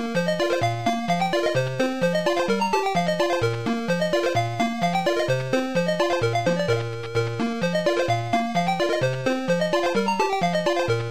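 From 5.7 s to the end, crude rate conversion sets in. The sound picks up a faint, gritty fizz that tracks loud and bright passages. It has no musical relation to the material. The pattern points to a 48 kHz to 44.1 kHz conversion done by simple linear interpolation, with no proper filter. The leftover error folds back as inharmonic tones. It sits roughly 45 dB below the signal, so it is quiet but audible.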